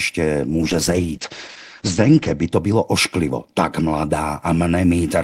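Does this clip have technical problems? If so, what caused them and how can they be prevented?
Yes: a call bitrate drop from 0.5 to 2.57 s, ending just before "bylo ošklivo tak", turns the speech rough and muffled. On a spectrogram, energy above 8 kHz disappears for about 1.8 s, which fits the encoder falling from 32 to 10 kbps. Prevent it by giving the call a more stable connection with more bandwidth headroom.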